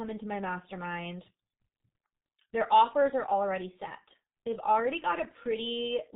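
From start to finish the speech carries heavy G.723.1 codec damage, which fits a rate near 6.3 kbit/s. Coding in 30 ms frames with a slowly updated voice model and nothing above 4 kHz leaves the speech muffled and hoarse, with consonants smeared together.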